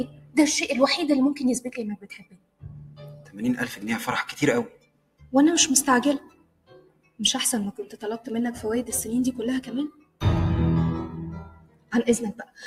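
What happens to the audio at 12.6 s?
The sound sinks sharply from 12.38 to 12.59 s, dropping by about 16 dB, so its sustain is swallowed while any sharper onsets slip through. This is sound cut by the noise suppressor: it judged that steady stretch to be noise and pulled it down harder than the surrounding material.

Behind that dip, the whole clip pumps and thins, with levels swinging by roughly 20 dB. A speech-oriented noise suppressor applied to music or sounds keeps treating held tones and decaying tails as background and repeatedly turning them down.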